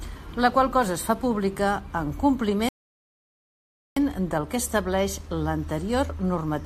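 A speech clip with a rebuffering stall from 2.69 to 3.97 s. Right after "es fa pública en" the sound drops to silence for about 1.28 s, then picks up at "del que estableix" exactly where it stopped. The player ran dry of downloaded audio and waited for more to arrive. Unlike a dropout or packet loss, nothing is skipped: the speech continues seamlessly, and the only damage is the added time.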